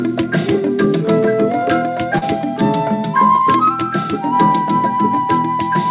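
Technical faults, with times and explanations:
2.18–2.23 s, short concealed packet loss: about 40 ms of the call audio arrived too late for the decoder. The receiver covered roughly 33 ms of that gap by extending the preceding sound, either repeating its pitch period or substituting shaped noise, and then crossfaded back into the real signal. This is heard as a brief smear or wobble. The band-limited sound, with nothing above 4 kHz, is consistent with a G.711 A-law call path.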